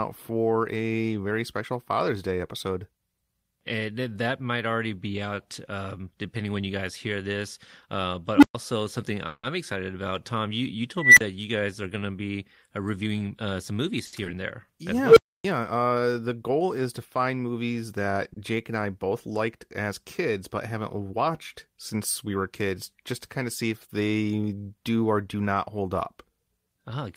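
Speech with three unstable-filter bursts: a tone near 300 Hz at 8.36–8.55 s, near 2 kHz at 10.97–11.21 s just before "you guys are going", and near 500 Hz at 15.04–15.44 s. Each swells over 62, 199 and 121 ms into clipping, then drops to silence for 120, 40 and 280 ms. On a waveform this looks like a ramp into clipping and then a flat line. On a spectrogram it is a single bright horizontal line. At 9.27–9.44 s a call audio freeze holds the last sound as a fading buzz or hiss for 160 ms with a 30 ms silent stretch, likely from delayed packets draining the jitter buffer. It shows as a smeared, stationary band. After "going to be uh", a jitter buffer speed-up at 13.06–13.91 s plays the sound at 110% speed, removing about a tenth of a second of pitch periods, so the harmonics stay level while the timing compresses. Short stalls from late packets stretch the sound by 70 ms at 14.06–14.14 s and by 30 ms at 18.33–18.37 s after "to find movies that", each showing as a briefly frozen spectral slice. 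A short concealed packet loss at 14.25–14.27 s drops 40 ms and leaves a smear. A jitter buffer slow-down at 14.66–14.94 s adds 36 ms, running at 89% speed, and appears as repeated pitch periods that stretch the waveform.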